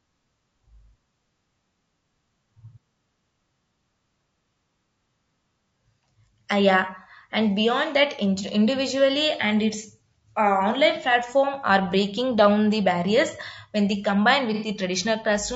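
Right from the start the speech has a rough, grainy texture, with a hiss sitting between the pitch harmonics and a top end that sounds thin and a bit synthetic. That's most likely low-delay AAC compression, the AAC-ELD kind used for video calls. Its short frames can't pin down the harmonics well and eat up bits, so at a rate around 32 kbps the codec damage is plainly audible.

Near the end, at 14.54 to 14.68 s, just after "when they combine", there's a brief smeared, noisy, phasey patch. That's AAC frame loss with concealment. A short run of frames went missing, about 90 ms of audio, roughly three frames' worth. The decoder patched the gap by filling in from the last good spectrum, which is why it smears instead of going silent.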